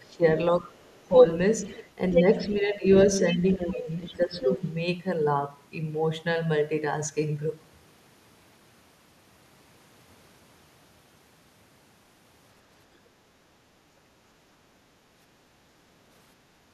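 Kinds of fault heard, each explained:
Speech suppressed in double talk: When both ends talk at once, the echo canceller can't tell this talker apart from the loudspeaker echo, so it pulls the whole mix down. Here that's likely what happens at 0.01 to 0.75 s, where the speech dips by roughly 15 dB at its worst, then in shorter dips of around 10 dB at 1.08 to 1.24 s and 2.38 to 2.84 s, and again through 3.35 to 4.63 s, where a good chunk of the stretch sounds ducked.
Other side's voice leaking through: A second voice rides along under the talker, the sort of thing you get when the far end plays out of a loudspeaker and the echo canceller likely doesn't scrub all of it from the mic. There are faint scraps at 0.04 to 0.16 s and 0.86 to 1.04 s, well below the speech. From 1.64 to 2.87 s it's about as loud as the talker, and at 3.35 to 4.58 s it's still clearly there, only a bit lower.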